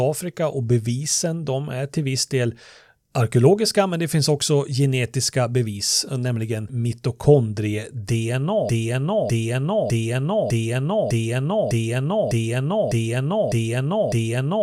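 At 8.69 s the speech locks into a broken-record loop. A fragment of about 0.60 s plays, then plays again, identically, with no gap. It repeats roughly ten times and runs to the end of the clip. The same rhythm and pitch return each time. Nothing new is heard after the loop begins. The player or stream likely stalled and kept resending its last held fragment. Whatever speech belonged in those final seconds is gone.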